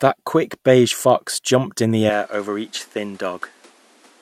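Input switched to a poorer device, from 2.10 s to the end: at that moment the speech becomes duller, with nothing above 12.9 kHz, drops by roughly 5 dB, and picks up a new background noise sitting roughly 30 dB below the voice. There is no gap at the change. The likely cause is the recording system moving its input to a different, lower-quality microphone, whose narrower bandwidth, lower gain and own noise floor replace the original capture mid-recording.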